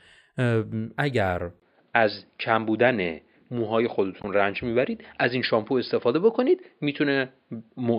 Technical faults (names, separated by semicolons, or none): input switched to a poorer device; damaged data in a compressed stream